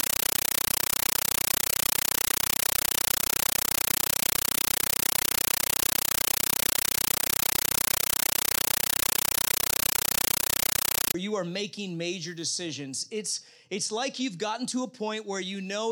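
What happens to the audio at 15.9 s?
Nothing goes wrong at 15.9 s; the audio runs intact through that moment with no dropout, click, distortion or other fault.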